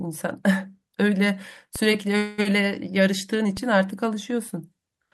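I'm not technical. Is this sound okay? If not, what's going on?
No, there are two faults in this speech clip.

The first is a DC step. At 1.76 s the baseline the whole signal sits on suddenly shifts, and at 3.57 s it shifts back. Each jump comes through as a short low thump or click, while the speech itself carries on unchanged between them. This happens when the recording equipment's zero point moves, for example when a converter recalibrates or an input carrying an offset is switched in.

The second is a call audio freeze, from 2.17 s to 2.40 s. For about 0.2 s the last bit of sound is stretched into a fading buzzy hiss instead of going quiet. Then the speech picks up exactly where it left off, so nothing is lost, but everything after that point runs about 0.2 s later. The likely cause is audio data arriving late over the connection, leaving the receiver nothing new to play and forcing it to fill the wait.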